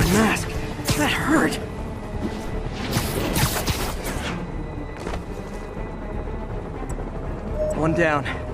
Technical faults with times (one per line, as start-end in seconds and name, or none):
1.14 damaged data in a compressed stream
7.34 damaged data in a compressed stream